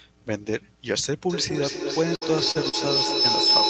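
From 1.3 s to the end, a feedback howl builds: the microphone-to-loudspeaker loop gains level on each trip, so the repeats grow instead of dying away and narrow to a tone around 5 kHz, repeating roughly every fifth of a second and peaking about 7 dB above the speech.

From 2.15 to 2.23 s, a burst of packet loss removes about 60 ms. The receiver extends the last sound and fades it across the gap, giving a brief held buzz or dying hiss before the audio jumps ahead with that section missing.

At 2.51 to 2.57 s and again at 2.69 to 2.75 s, short concealed packet loss drops about 40 ms each time. The decoder bridges each hole by continuing the preceding sound and blending back, heard as a quick smear or wobble within the speech, within the 8 kHz bandwidth of the Opus call path.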